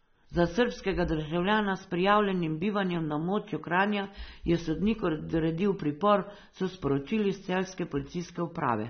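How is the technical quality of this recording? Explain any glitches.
The technical quality is compromised by AAC compression running throughout the recording. Short of bits, the encoder likely discarded everything above 6.3 kHz and quantised the remaining bands coarsely, which fits AAC-LC at around 24 kbps. The damage is plainly audible: the speech sounds dull and smeared, with a warbling, fizzy texture on sibilants and held sounds.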